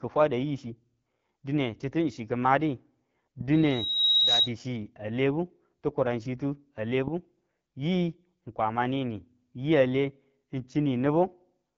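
From the first second to the last, the speech carries the sound of the AMR wideband (HD Voice) codec, and the damage is plainly audible: a rough, raspy, buzzy texture. That roughness points to one of the codec's lowest modes, consistent with about 8.85 kbit/s, where the pulse-driven vocal tract model has too few bits to follow the voice closely. On a spectrogram, harmonics look smeared and grainy, and energy stops flat near 7.6 kHz.

From 3.52 to 4.53 s, just before "a lebu tikuran chitu", a loudspeaker feedback squeal breaks in. The microphone hears its own loudspeaker output, and at 3.8 kHz the loop gain rises above one, so that single tone feeds itself. It swells over roughly half a second into a piercing whistle about 5 dB above the speech. A spectrogram shows one bright horizontal line at 3.8 kHz, and the waveform envelope bulges over that second.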